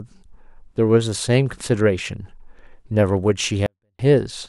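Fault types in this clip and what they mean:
24-bit alignment error (too quiet): 24-bit samples sitting in the low three bytes of a 32-bit word were read as if they filled the whole word, so each value lands 8 bits, about 48 dB, below its proper level. In this speech clip the level collapses abruptly from 3.66 to 3.99 s, a span of about 0.33 s. The sound stays clean but nearly inaudible, then returns to full level just as suddenly.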